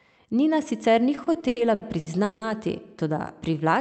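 Repeated stalls (stutter) run from 1.15 to 2.44 s. Eight times, late packets left the jitter buffer empty, so the receiver stretched the last sound to cover 480 ms, with the longest hold at 170 ms. Nothing is lost, but the speech drags and stutters.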